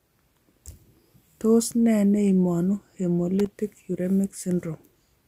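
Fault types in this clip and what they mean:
Loose connector crackle: a worn or dirty contact in the signal path intermittently breaking and remaking as it shifts, chopping the speech. Here it gives two short irregular bursts of scratchy crackle, at 0.52 to 0.59 s and 3.39 to 3.52 s.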